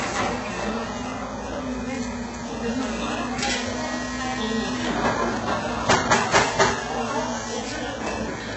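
The audio was likely squeezed through HE-AAC compression at a very low rate; the heavy damage fits a bitrate around 8 kbps. Only the lower band is truly coded, and the upper range is rebuilt by copying lower bands upward under a coarse envelope, with nothing at all above 8 kHz. Throughout the clip the top end sounds synthetic, its harmonics misaligned across the crossover, so sharp, hissy detail comes out gritty and metallic.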